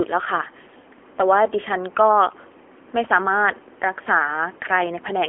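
Throughout, the speech carries AMR narrowband mobile codec damage: nothing above 3.4 kHz or below 300 Hz, and a buzzy, synthetic vocal-tract rendering that fits a rate near 8 kbit/s. Unlike a simple band-limit filter, the codec's pulse-driven model audibly reshapes the voice itself.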